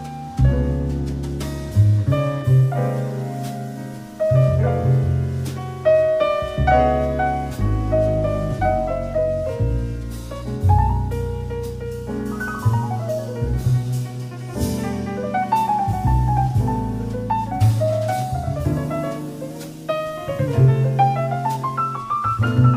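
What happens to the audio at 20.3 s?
A drift correction step runs from 19.51 to 20.48 s. The audio abruptly plays 5.4% fast, raising the pitch by 91 cents, nearly a semitone, then snaps back. Clock-matching software likely changed the playback rate in one jump to rebalance its buffer.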